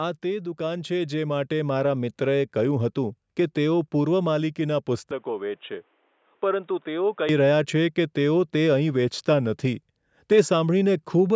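Automatic gain rising, from 0.21 to 1.79 s: the gain control judged the input too quiet and lifted its gain by about 8 dB over roughly a second and a half. The speech and the room tone swell up together, settling just before "મિત્રએ કહ્યું હતું કે".

Input switched to a poorer device, from 5.11 to 7.29 s: the speech abruptly turns duller and boxier, with nothing above 3.8 kHz, a level about 5 dB lower, and a faint new noise floor some 40 dB down. There is no gap at the changeover. The likely cause is the system switching to a narrower-band microphone or headset call profile, then returning.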